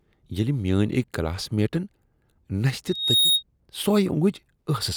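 From 2.87 to 3.43 s, a loudspeaker feedback squeal cuts in. The microphone is picking up its own loudspeaker. At 3.7 kHz the loop gain exceeds one. A single piercing tone swells over about a third of a second. It peaks roughly 5 dB above the speech.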